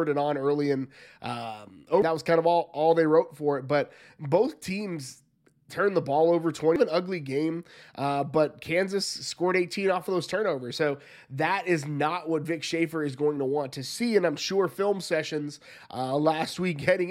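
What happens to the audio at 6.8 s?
At 6.76 s, right after "turned the ball over", the compressed stream carries damaged data: some bytes at that point are wrong, so the decoder cannot read the frame there, drops out of sync and scans ahead for the next valid frame header. The result is a brief chirp or blip before the speech resumes at "an ugly game uh".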